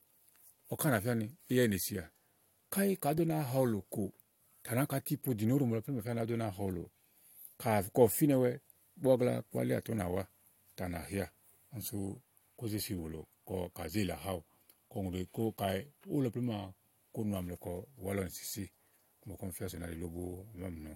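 Listening through the recorded speech, nothing technical stood out as wrong at any point.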